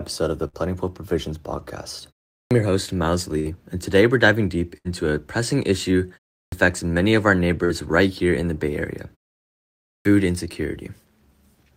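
Speech with two distinct dropout faults. A burst of packet loss hits at 0.47–0.56 s, 3.39–3.48 s, 4.77–4.88 s and 7.65–7.72 s. Each time the receiver keeps the last sound going for roughly 45 to 70 ms, fading it into a held buzz or hiss, and then jumps ahead, skipping 40 to 80 ms of audio. At 3.39 s the resumed audio also lands about 25 ms later. Clipped starts after a pause occur at 2.40 s, 6.41 s and 9.95 s, following silences of 0.36 s, 0.31 s and 0.87 s. At each, roughly 0.1 s of the opening sound is missing, so speech begins abruptly, likely because the output device sleeps during silence and needs time to wake. The two faults are easy to tell apart. Packet loss happens mid-sound and leaves a smeared filler before the skip. A clipped start comes only after silence and has no filler, just a missing onset.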